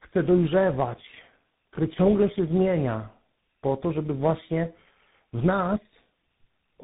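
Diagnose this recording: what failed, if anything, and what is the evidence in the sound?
This is tandem speech coding at the codec stage, running the whole way through. The speech is rough, muffled and warbly, with nothing above about 3.8 kHz. It sounds like three speech coders in a row, likely GSM-type then CVSD, each re-coding the previous one's damage.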